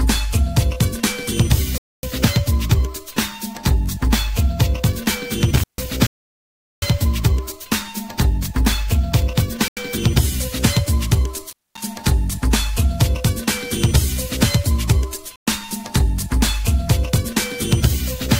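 Bluetooth stalls at 1.78 to 2.03 s, 6.07 to 6.82 s, 9.68 to 9.77 s and 15.36 to 15.47 s drop the sound to dead silence for 0.25 s, 0.76 s, 88 ms and 110 ms. These were likely caused by interference holding up the wireless packets until the headphones' buffer emptied and playback paused. Intermittent contact at 5.56 to 5.86 s and 11.49 to 11.79 s is a loose plug or cable briefly opening the line. The sound breaks off for about 147 ms and 226 ms, with crackle at each edge and faint hiss during the gap.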